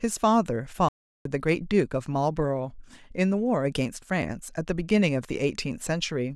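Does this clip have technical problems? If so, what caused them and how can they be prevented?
Yes. A playback stall cuts the speech to silence from 0.89 s to 1.25 s, a gap of about 370 ms, before it resumes. The likely cause is the player's buffer running dry or its thread being blocked. Larger buffering and keeping decoding off blocking threads prevent it.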